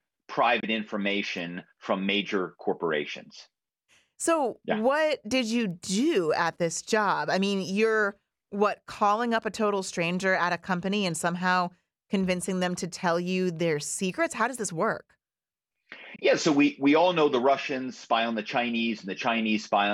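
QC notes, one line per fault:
0.60–0.65 s and 16.16–16.21 s, Bluetooth dropout: the speech drops to silence for about 23 ms each time, then resumes further along as if it had kept playing underneath. The gap length fits one audio packet lost in transit, likely because it reached the headphones too late.
1.39 s and 5.71 s, bit error spike: a single sharp, broadband tick unrelated to the speech, first just before "from major corporations", then between "yeah what did you" and "do at this job". A flipped bit throws one sample off by a power of two before it snaps back.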